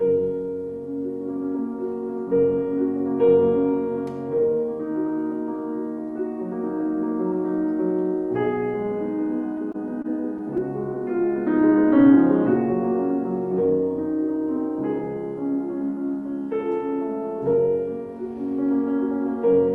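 The audio has come through a call codec, with highs rolled off near 12 kHz, which fits Opus at a modest bitrate. From 9.57 to 10.60 s there are scattered short gaps. About five tiny packet losses, none longer than roughly 20 ms, were patched by extending the last sound, leaving brief ticks and smears. From 10.94 to 12.17 s comes a jitter buffer slow-down. The receiver repeated small stretches to rebuild its reserve, adding 81 ms. Playback runs at 94% speed with unchanged pitch, so sounds drag slightly.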